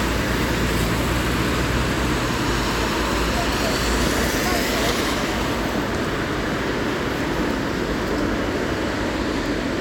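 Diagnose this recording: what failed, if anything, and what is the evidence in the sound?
Listening closely to the recording, nothing in the sound stood out as a failure at any stage of the chain.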